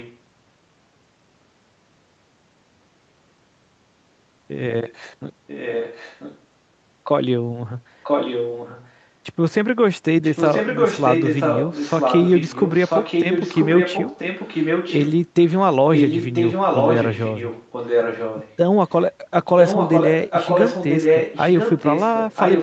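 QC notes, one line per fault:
0.0–0.19, 5.47–6.4, 8.03–9.07, 10.23–15.14, 15.92–18.57, 18.88–18.94 and 19.44–22.62 s, echo leak: a copy of the speech returns about 990 ms late, from barely audible to as loud as the speech itself by the end. The likely cause is a far-end loudspeaker whose echo canceller passed residual pickup back.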